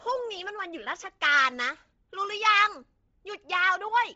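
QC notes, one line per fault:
Throughout: Bluetooth LC3 compression. Speech is heavily degraded, with nothing above 7.8 kHz and a grainy, breathy hiss in place of upper detail, likely LC3 noise filling at a low bitrate, which fits 24 kbps. Unlike a plain low-pass, the top sounds textured, not merely dull.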